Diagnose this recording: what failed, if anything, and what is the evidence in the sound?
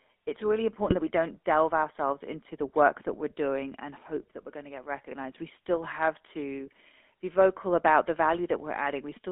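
Codec stage. The whole clip carries the GSM full-rate codec's buzzy, gravelly roughness. The band runs only from 250 Hz to 3.5 kHz. This fits a 13 kbps full-rate coder, which rebuilds speech from a vocal-tract model driven by sparse, regular pulses.

Network stage. GSM bit errors break the speech up. From 0.84 to 0.95 s, between "it's really" and "that we don't delve", it squawks and gargles. A single brief pop follows "still have" at 6.59 s. Flipped bits corrupted the filter, pitch or gain values, distorting those frames.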